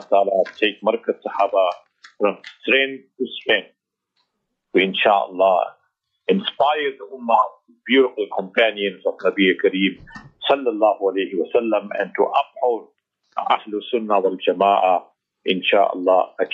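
No technical faults can be heard anywhere in the audio, and the signal stays steady and intact throughout.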